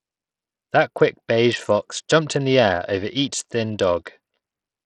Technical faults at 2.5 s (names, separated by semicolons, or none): Bluetooth SBC compression